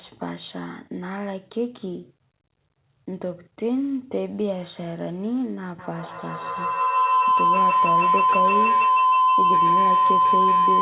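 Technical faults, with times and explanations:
5.79–10.81 s, feedback howl: the loop gains on each pass, growing a tone near 1 kHz to about 8 dB above the speech, with the loop repeating roughly every 150 ms. On a spectrogram it is a bright horizontal line.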